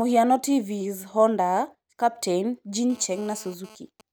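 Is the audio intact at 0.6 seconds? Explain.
Yes, at 0.6 seconds the speech plays through intact, with no fault at that moment.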